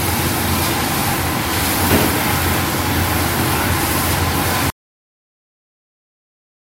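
A cut-off end at 4.70 s ends this recording of sounds abruptly. The audio stops in the middle of an event rather than fading or ringing out, and everything after that point is flat digital silence for roughly the final two seconds. There is no decay tail at all, which indicates the closing buffers were never written to the file or sent to playback, so the sound was severed rather than allowed to finish.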